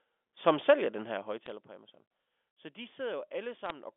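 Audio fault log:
0.92–1.76 s, zipper noise: Just after "som sælger", the level falls by about 15 dB in 1 dB jumps rather than a smooth glide. The jumps come roughly 30 times a second, and each one puts a tiny click into the waveform. Together they make a fine, even zipping that lasts only as long as the level is moving. The steady rate and its tie to the fade set it apart from scattered line errors.
1.46–1.50 s and 3.66–3.70 s, bit errors on a digital phone line: Two short bursts of sharp, irregular ticks, each about 40 ms long, sit on top of the speech. On a G.711 mu-law line, one flipped bit changes a single sample, and throws it far off when the sign or a high-order bit is hit. The error rate is only a small fraction of a percent, but hits on high-order or sign bits give sharp ticks. Unlike zipper noise, the ticks have no regular rhythm and do not follow any level change.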